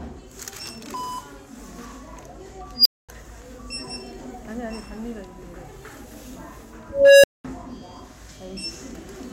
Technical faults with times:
2.75-3.09 unstable filter
6.90-7.45 unstable filter

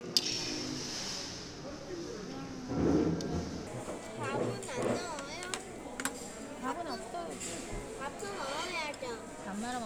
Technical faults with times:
0.00-3.67 section at the wrong speed

